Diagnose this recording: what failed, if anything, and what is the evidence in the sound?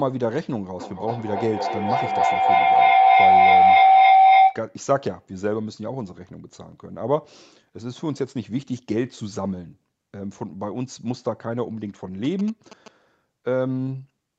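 Feedback howl, acoustic loop between loudspeaker and microphone. From 0.79 to 4.68 s a tone near 700 Hz builds, with the loop repeating about every 300 ms. It peaks about 11 dB above the speech. Each trip round the loop adds gain, so repeats grow and narrow.

GSM signalling bursts, picked up in the analogue wiring. From 12.24 to 12.88 s there is a galloping pattern of short buzzes at 217 Hz, roughly ten decibels below the speech. A nearby 2G phone was signalling. The circuit rectified its radio bursts into audio.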